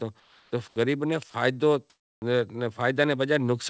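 From 0.20 to 0.52 s the pause carries comfort noise in place of the background, likely because the sender stopped transmitting during silence and the receiver synthesised a stand-in. The real room tone gives way to a flat, featureless hiss about 3 dB quieter. The same swap recurs from 0.68 to 0.76 s, about 2 dB down, and from 1.90 to 2.22 s, about 5 dB down. On a spectrogram these stretches appear as smooth, even grey bands without the fine texture around them. On the waveform they show as a slightly lower, uniform noise floor.

At 1.30 to 1.34 s, sound is dropped by the voice detector. About 30 ms of speech was likely judged to be background and not sent, so a brief patch of steady noise replaces it. The speech trace shows a short notch where its energy collapses to the noise level. In the spectrogram, the harmonic structure breaks for that instant.

At 2.19 to 2.22 s, the onset is clipped by the voice detector. 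It likely reacted about 30 ms late, so the speech that resumes there begins abruptly, with no soft attack. The waveform jumps from noise straight into the speech, and the spectrogram shows a hard vertical edge. Throughout the clip, the call path's codec leaves nothing above 8 kHz.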